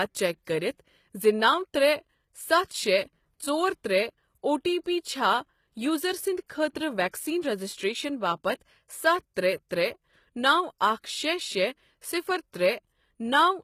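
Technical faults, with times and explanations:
Throughout, HE-AAC compression: the speech carries plainly audible codec damage, with nothing above 14.9 kHz and a bright but synthetic treble whose harmonics fail to line up with the band below. S sounds turn gritty and lispy, which fits a low bitrate around 20 kbps, likely from spectral band replication rebuilding the top octave.
4.84 to 4.86 s, 7.09 to 7.13 s, 9.34 to 9.37 s and 9.69 s, pre-echo: a short hiss spreads 18 to 48 ms ahead of each sharp attack, softening its edge. The codec's block-wide quantisation noise leaks backward into the quiet before the onset, unlike reverb, which trails after.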